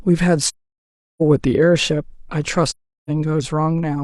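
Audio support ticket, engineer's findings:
AAC frame loss with muting, two events: 0.46–1.22 s and 2.68–3.10 s. Decoder lost consecutive AAC frames and zeroed their spectrum, so the speech drops to silence. Gaps of about 0.73 s and 0.38 s point to runs of roughly seventeen and nine frames. The overlapping transform windows fade the speech out into each hole and back in over about one frame, giving soft edges rather than hard cuts.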